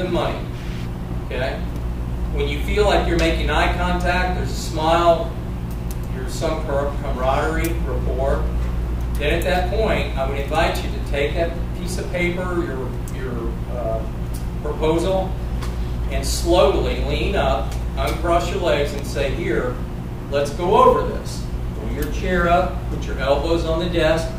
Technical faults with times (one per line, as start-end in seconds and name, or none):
none